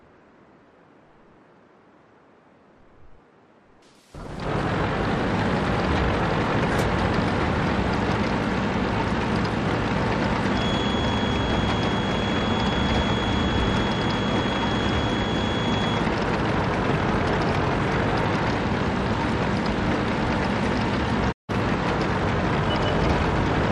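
From 10.48 to 16.09 s, a thin, steady whistle at 3.3 kHz sits behind the sound. It stays roughly 15 dB below the main signal. Its level swells and fades slowly but never builds. This is a feedback whistle. The likely cause is a loudspeaker-to-microphone loop held just at the edge of feedback. One frequency keeps recirculating without running away. It stops after about five and a half seconds.

At 21.31 s, the audio fades out over about 20 ms and goes silent. It returns at 21.51 s. This is a digital broadcast dropout. The receiver stopped getting usable data and muted the output until clean data came back. About 160 ms of material is simply missing. That gap fits a run of several lost frames. The hole is short, but it breaks the continuity of the sound.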